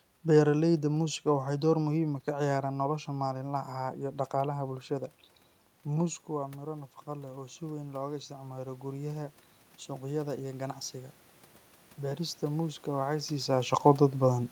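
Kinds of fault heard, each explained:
Automatic gain rising: after the input fell about 11 dB, the gain control crept up about 9 dB over several seconds, swelling voice and room noise together.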